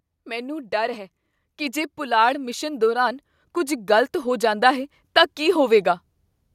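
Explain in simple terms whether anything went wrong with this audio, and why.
From about 0.11 s to about 5.88 s, the whole recording slowly gets louder, as if someone were turning up a volume knob by hand. The speech and the background noise behind it swell together, so the background grows along with the voice. This is automatic gain rising: the recording system judged the input too quiet and kept raising its level bit by bit across nearly six seconds, ending noticeably louder than it began.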